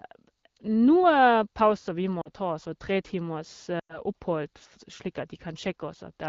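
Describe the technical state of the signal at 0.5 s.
At 0.5 s the speech is intact, with no fault at that moment.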